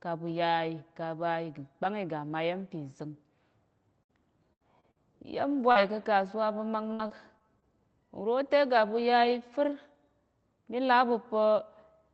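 This is a speech recording carried over a call path whose Opus coding cuts the highs at 8 kHz. Three held buzzes or fading hisses, at 4.03 to 4.11 s, 4.53 to 4.62 s and 4.91 to 4.98 s, are each a burst of packet loss: the receiver stretched the last sound for 46 to 74 ms, then jumped ahead past 40 to 80 ms of missing audio. Brief smears at 4.80 and 5.72 s are short concealed packet loss, where 20 to 40 ms went missing and was patched by continuing the preceding sound before blending back. The end of that second patch, around 5.75 to 5.77 s, turns rougher and noisier because it is a lost packet rebuilt from error correction: the decoder played a low-bitrate copy of 20 ms carried in the following packet. From 6.93 to 7.64 s the sound goes choppy and robotic. This is repeated packet loss, with four separate holes, the longest 58 ms, patched over about 16% of that span, and a few tens of milliseconds rebuilt from redundant copies.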